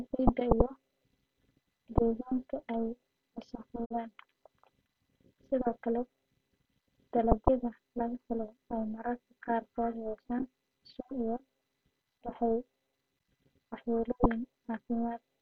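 Speech, with a digital broadcast dropout from 3.84 to 3.95 s: a 20 ms fade to silence where corrupted data muted the receiver, a gap consistent with one lost frame.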